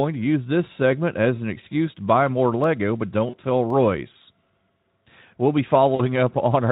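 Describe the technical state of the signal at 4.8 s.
At 4.8 s the speech is intact, with no fault at that moment, only the light Speex coding that carries the whole clip.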